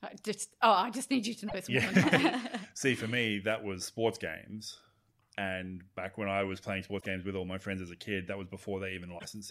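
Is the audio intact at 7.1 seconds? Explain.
No. Damaged data in the compressed stream corrupts the audio from 6.97 to 7.06 s, between "when I was playing" and "with all my friends". The decoder misreads the bad frames, loses sync and hunts for the next valid header, producing a brief garbled blip.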